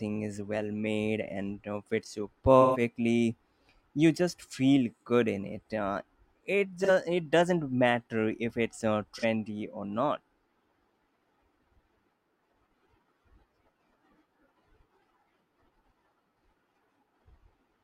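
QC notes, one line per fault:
2.61–2.81 s, 6.83–6.90 s, 9.18–9.24 s: AAC frame loss with concealment. Short smeared, noisy, phasey patches replace the sound. The first lasts about 128 ms, which fits three lost frames. The others last about 43 ms each, which fits one lost frame. The decoder patched each gap from the last good spectrum.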